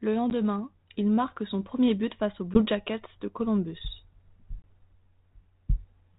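Packet loss on an ADPCM call occurs at 0.30 s, just before "il marque son premier", at 2.54 s, right after "premier but face aux", and at 4.62 s. Each is a hard-edged gap of silence, about 10 ms at the first two (roughly one packet) and 20 ms at the third (roughly two). The receiving decoder's adaptive predictor and step size drift from the sender's, so the speech resumes slightly distorted. It settles over the next few tens of milliseconds, around 0.37, 2.62 and 4.71 s. The band-limited telephone sound fits 32 kbit/s G.726.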